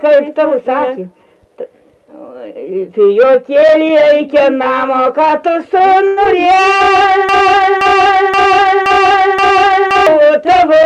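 At 6.07 to 6.19 s, a short stall from a late packet holds the last sound for about 92 ms. On a spectrogram this shows as flat, smeared horizontal bands.

At 6.25 to 6.27 s, a short concealed packet loss loses about 40 ms of audio. The gap is bridged by a brief synthetic continuation, heard as a tiny smear or wobble and seen as a blurred sliver where detail drops out.

From 7.29 to 10.07 s, a broken-record loop repeats a 0.52 s fragment five times back to back, most likely because the stream stalled and kept resending its last piece. The waveform shows identical blocks tiling at that period.

Throughout, the call path caps the spectrum at 12 kHz, consistent with Opus at around 64 kbps.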